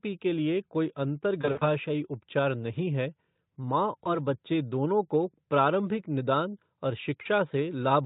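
Speech clip, carried over Speex, which itself sounds clean. It has VoIP packet loss concealed by the speech codec. From 1.41 to 1.63 s, after "पी के लिए कोई", the voice turns buzzy or noisy and fades in patches. That fits about 120 ms lost in runs up to 60 ms. At 4.03 s, after "नहीं है मां", a brief smear lingers to 4.18 s. At 7.21 s, after "को प्रारंभिक निदान और", 40 ms is bridged. The decoder extrapolates from earlier frames.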